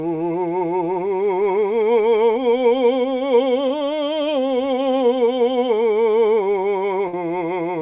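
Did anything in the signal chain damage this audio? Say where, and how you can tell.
Yes. At the network stage there is a short concealed packet loss from 3.68 to 3.71 s. About 20 ms of the music never arrived, and the receiver covered roughly 16 ms of it by extending the preceding sound before blending back into real audio. It is heard as a brief smear or wobble in the music. It differs from a burst because it is a single frame-sized hole: nothing is held, nothing fades, and the music picks up almost exactly where it left off.

A burst of packet loss falls between 7.08 and 7.14 s, again in the network path. Here about 50 ms went missing in a row, and the concealment ran for around 52 ms, repeating the last sound while turning it down. The result is a held, decaying buzz or hiss, after which the music resumes further along with that span skipped. The audible fade and the jump in the music separate it from the momentary smear at 3.7 s. 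Throughout, nothing is heard above 4 kHz, which fits a G.711 mu-law call path at 64 kbps.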